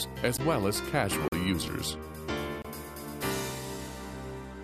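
A block of digital silence at 0.37 s (about 14 ms, heard as a tick), 1.28 s (43 ms, fitting a 2048-sample buffer) and 2.62 s (25 ms): the output buffer went unfilled, so audio cuts out and returns abruptly.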